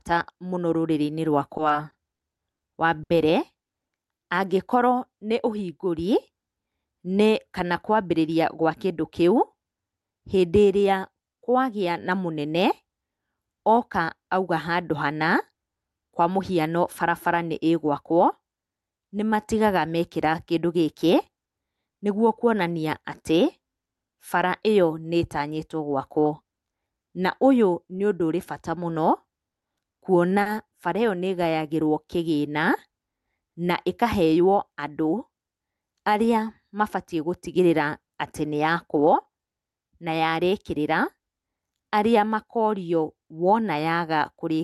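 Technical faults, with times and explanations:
1.57–3.12 s and 29.51–30.48 s, repeated stalls (stutter): late packets emptied the buffer six and then five times, the receiver stretching the last sound across gaps up to 70 ms and 40 ms, so the speech catches and stutters rather than dropping out.
1.74–4.55 s and 30.30–32.24 s, jitter buffer slow-down: repeated pitch periods added 54 ms and 87 ms, so speech drags at 98% and 96% speed with unchanged pitch, smoothly drawn out rather than catching.
17.87–20.83 s, 26.18–27.92 s and 34.25–35.00 s, jitter buffer speed-up: trimmed pitch periods removed roughly 70 ms each time, running speech faster at 102%, 104% and 108% speed, hurried at 108%, with pitch unchanged, unlike a tape-style speed change.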